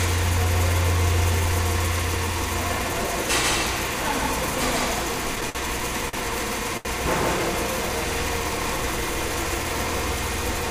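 Throughout, a doubled audio track: a full-band copy at roughly equal level trails about 150 ms behind, likely from a second capture. The waveform shows repeated onsets, and the spectrogram shows a shifted twin.

At 5.50, 6.09 and 6.77 s, a short stall from a late packet holds the sound for 52, 44 and 77 ms with nothing lost. Each appears as a frozen, smeared stretch.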